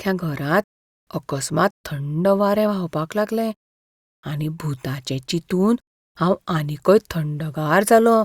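Nothing goes wrong anywhere in this bit of speech, so there's no fault to point to at any moment.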